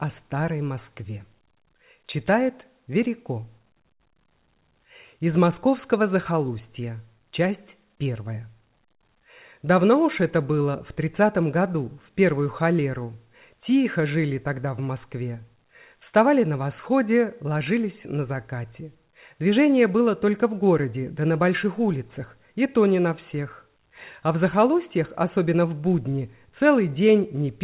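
Nothing goes wrong anywhere in the clip; it's simply the sound of a call carried over G.711 A-law at 64 kbps, so the usual telephone-band character is there, with nothing above 4 kHz.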